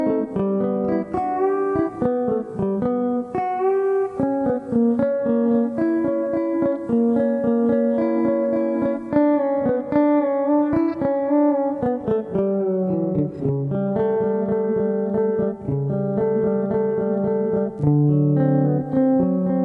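No technical faults are audible.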